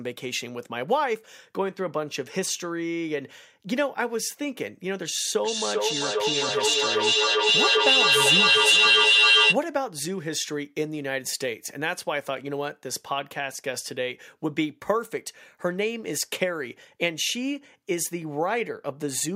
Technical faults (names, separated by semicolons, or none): feedback echo between two devices